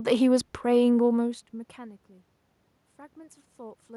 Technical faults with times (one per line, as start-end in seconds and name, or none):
none